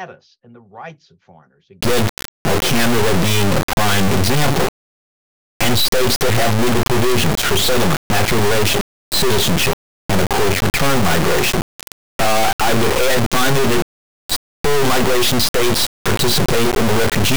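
Integer read as float from 1.81 s to the end: the samples, which were written as 32-bit integers, are being interpreted as 32-bit floats, so values land near zero or far past full scale. The result is a brutally loud, buzzing square wave that collapses into silence wherever the sound goes quiet.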